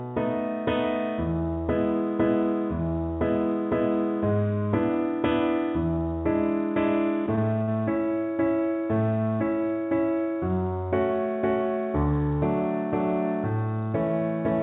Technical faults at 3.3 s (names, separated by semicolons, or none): sample clock jitter